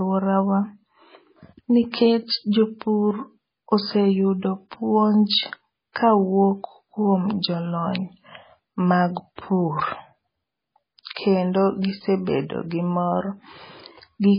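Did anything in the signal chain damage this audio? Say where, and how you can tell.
Yes. The codec stage did the damage. Throughout, the speech has no content above 5 kHz and sounds heavily watery and swirly. This is likely MP3 compression at a very low bitrate, around 16 kbps. The encoder cut the treble and dropped weak frequency lines frame by frame.

A pre-echo appears from 9.36 to 9.38 s. A short hiss of about 27 ms runs ahead of a sharp attack, which sounds smeared. The transform block spread its quantisation noise, sized for the loud onset, into the quiet moment before it.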